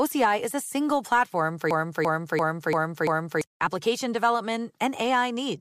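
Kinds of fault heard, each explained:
System hang loop: a 341 ms slice repeats five times, a stutter at about 2.9 Hz after "a single platform for", as a frozen system kept replaying one ring buffer.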